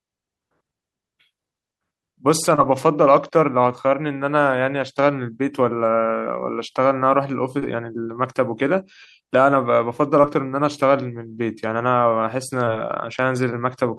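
Short concealed packet loss occurs four times, at 2.55–2.59 s, 7.59–7.64 s, 10.22–10.25 s and 12.65–12.69 s. Each time about 20 ms of audio, which fits one lost packet, arrived too late to decode. The receiver extended the preceding sound to cover the gap, for 14 to 22 ms, then crossfaded back into the real signal. Each event is a brief smear or wobble in the speech.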